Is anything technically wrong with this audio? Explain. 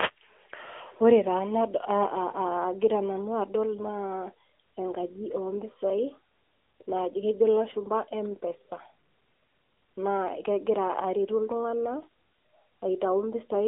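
Yes. Throughout the speech, the AMR narrowband mobile codec is plainly audible. The band runs from 250 Hz to 3.4 kHz, with nothing above 3.7 kHz. Its vocal-tract model and sparse pulses make the speech thin and somewhat buzzy and synthetic, which fits a 10.2 kbps mode.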